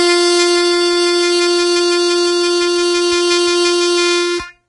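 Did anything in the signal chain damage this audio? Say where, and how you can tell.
Yes. Across the whole music clip, nothing sounds above 10.6 kHz, and the remaining treble is hissy and grainy, with roughened tones and smeared attacks. This is likely heavy Vorbis compression at the codec stage, consistent with a bitrate near 26 kbps, where coarse treble quantisation replaces fine detail with equal-energy noise.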